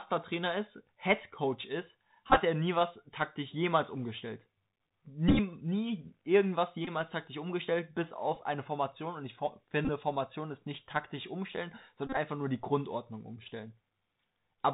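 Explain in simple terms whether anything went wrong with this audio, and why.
The whole recording sounds muffled and gritty, with scratchy s sounds and a grainy hiss. That comes from the Bluetooth CVSD headset codec, a narrow phone-style link that cuts everything above 4 kHz.

Brief buzzy stutters break in at 2.29 to 2.38, 5.28 to 5.40, 6.85 to 6.89, 8.35, 9.85 to 9.89 and 12.07 to 12.18 seconds. Each is a Bluetooth headset packet repeated: lost radio packets were filled by replaying the previous one.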